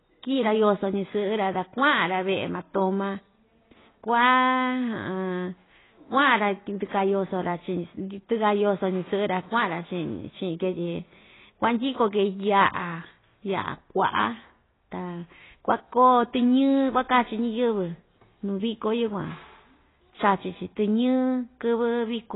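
Across the whole speech clip, nothing comes through above 3.9 kHz, and sibilants sound smeared and warbly. That's likely heavy AAC compression, at a bitrate down around 16 kbps.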